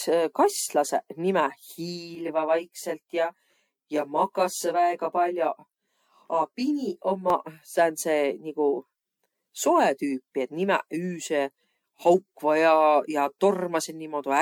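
Throughout the speech, generation loss is audible. The sound is swirly, smeared and hollow, with blurred attacks, more than a 96 kbit/s MP3 alone would give. It likely comes from about ten rounds of decoding and re-encoding, each adding fresh quantisation noise and spectral holes.

From 2.15 s to 7.30 s, channel delay (comb filtering) appears. One channel lags the other by roughly 20 ms, and the two are summed to mono. Shared content cancels at closely spaced notches starting near 30 Hz, so the speech sounds rough or slightly doubled.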